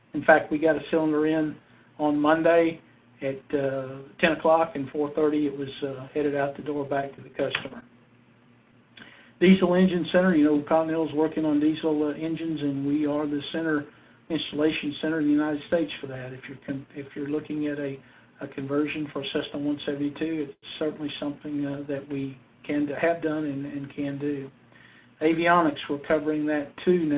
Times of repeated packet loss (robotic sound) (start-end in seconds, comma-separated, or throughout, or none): 6.78-7.84